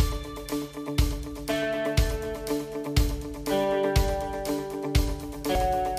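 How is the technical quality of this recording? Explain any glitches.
One glitch stands out, near the very end. At 5.55 s, damaged data in the compressed stream makes the decoder misread a frame and resync, giving a brief audible glitch.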